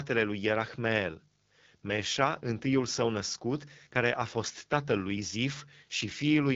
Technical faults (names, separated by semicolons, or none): AMR wideband (HD Voice) codec